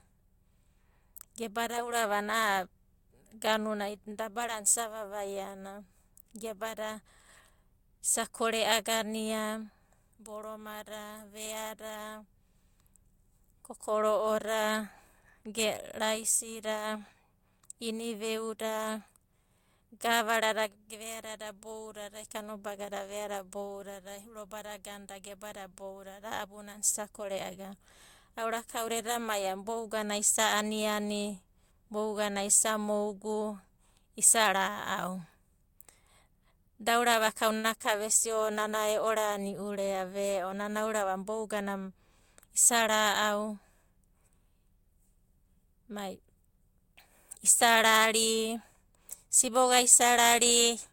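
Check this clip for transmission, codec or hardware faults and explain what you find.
One transmission fault is present, a short stall from a late packet at about 37.57 to 37.66 s, just before "ka vesia". A packet arrived late, so the emptied jitter buffer was bridged by stretching the preceding sound for 64 ms, heard as a held syllable with a slight buzz or dip. Unlike a lost packet, nothing is skipped. The speech resumes exactly where it paused, now 64 ms later.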